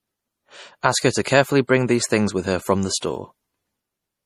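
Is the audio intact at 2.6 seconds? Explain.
No. At 2.6 seconds, as throughout the speech, the sound is dulled and carries swirly, smeared coding artefacts. This is likely low-bitrate audio saved at a high bitrate: a lean MP3 pass, around 40 kbit/s, stripped detail that a later high-bitrate MP3 encode cannot restore.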